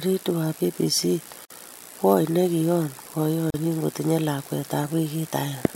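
Speech interrupted by a gap at a join of encoded pieces: 51 ms at 1.45 s, before "kwony ne kion", and 38 ms at 3.50 s, two seconds apart. Untrimmed encoder delay and padding leave these silences, which show as blank strips with smeared edges on a spectrogram and flat dropouts in the waveform.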